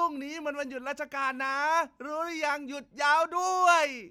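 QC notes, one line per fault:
No faults heard.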